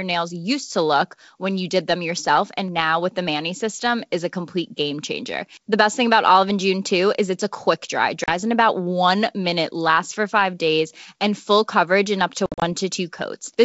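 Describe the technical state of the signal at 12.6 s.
At 12.6 s the speech is inside a burst of packet loss on an ADPCM call, running from 12.46 to 12.66 s, just after "coverage in up to". About 120 ms of audio drops to hard-edged silence, scattered over 160 ms with the longest hole 60 ms, which fits roughly seven lost packets. Unlike a plain dropout, the speech returns slightly distorted, because the decoder's predictor and step size have drifted from the sender's.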